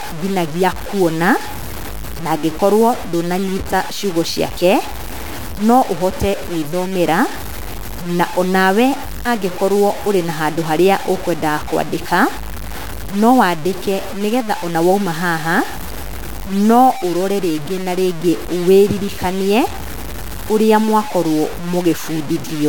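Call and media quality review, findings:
Low bit depth without dither, throughout. Grainy, signal-following distortion on speech; quiet syllables gritty, tails sputter or cut to silence. Likely truncation to about 5 bits, error roughly 15 dB below signal. Waveform: visible stair-steps. Spectrogram: broadband haze tracking speech energy, gone in gaps.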